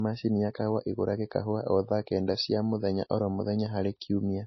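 Throughout the speech, nothing is present above about 5.8 kHz, and the smeared, swirly artefacts of a very low-bitrate MP3 are audible. This is likely low-bitrate audio saved at a high bitrate, a 24 kbit/s-class encode re-saved near 192 kbit/s. Despite its larger size, the file restores none of the lost detail.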